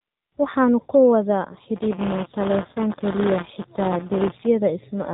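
Throughout, the speech is muffled and buzzy, with nothing above 4 kHz and a synthetic, reedy edge. This is the AMR narrowband mobile codec: 8 kHz sampling and a pulse-driven vocal-tract model, with damage that suggests a low mode of around 7.4 kbps.

Right after "ku wada", from 1.76 s to 4.47 s, a steady robotic rattle at about 172 Hz rides on the speech. This is buffer tearing. Writer and reader have slipped within the ring buffer, so a small slice of each period repeats audio from roughly 20 ms earlier, consistent with a 256-sample buffer.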